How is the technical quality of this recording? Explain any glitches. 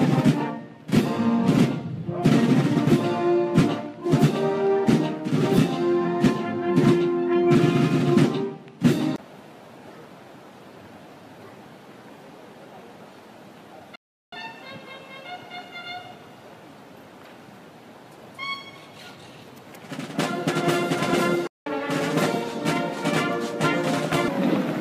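The recording is interrupted twice by playback stalls, where the sound cuts out mid-flow and then resumes. The first runs from 13.96 to 14.33 s, about 370 ms; the second from 21.47 to 21.66 s, about 190 ms. Each is likely the player running short of buffered data or having its output thread blocked, so nothing reached the output until it caught up. On a waveform each shows as a flat gap; on a spectrogram, a clean vertical blank band.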